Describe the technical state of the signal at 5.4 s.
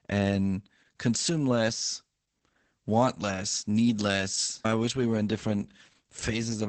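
At 5.4 s the speech carries Opus voice compression, present across the whole clip rather than at this moment alone. The coder is running in its SILK linear-prediction mode at wideband, with nothing above 8.5 kHz, so the sound is muffled at the top. The excitation is coded very coarsely, which fits a bitrate near 10 kbps. The result is heavy damage: a hoarse, slightly robotic speech quality.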